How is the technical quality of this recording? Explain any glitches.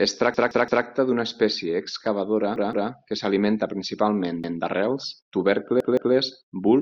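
The recording has a recurring playback fault: a repeated buffer occurs four times, at 0.34–0.85 s (just before "d'una espècie excavadora que"), 2.56–2.90 s (between "d'una espècie excavadora" and "que s'alimenta principalment d'arrels"), 4.44–4.61 s (after "excavadora que s'alimenta principalment") and 5.80–6.14 s. When fresh audio missed its deadline, the device replayed the previous 170.67 ms chunk, which fits an 8192-sample buffer. That chunk sounds three extra times in the first event, twice in the second and fourth, and once in the third, so each event is heard as a choppy stutter with hard joins and no audio dropped. On a waveform, the same block shape repeats identically, with abrupt edges. On a spectrogram, the same pattern is copied side by side, with vertical seams at each boundary.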